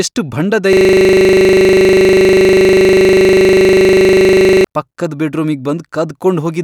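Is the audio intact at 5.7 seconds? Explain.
Yes, the speech at 5.7 seconds is intact, with no dropout, click, distortion or other fault at that moment.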